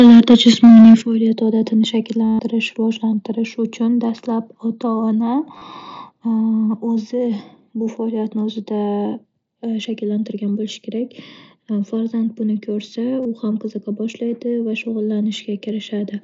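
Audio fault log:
0.00–0.95 s, microphone overload: the loudest syllables have a harsh, crackling edge where the waveform tops are flattened, with peaks pushed about 4 dB past the converter's limit and roughly a fifth of samples cut. The likely cause is input volume set too high.
1.02 s and 2.04 s, microphone volume stepped down: voice and background drop together in one sudden step, by about 10 dB right after the distorted opening and then by about 2 dB more. This is likely the call software cutting the device's input gain after detecting clipping.
2.25–2.39 s, 4.08 s, 5.58–5.62 s and 13.23–13.25 s, concealed Bluetooth headset packet loss: missing audio between headset and phone is filled by repeating the best-matching recent waveform. The single 4.08 s gap is nearly hidden. The 142.5 ms run at 2.25 s becomes a buzzy, full-level held tone with a slight warble as real sound resumes, and the 37.5 ms and 22.5 ms gaps are shorter versions of the same effect. 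In the wideband mSBC stream, the sound reaches up to 8 kHz.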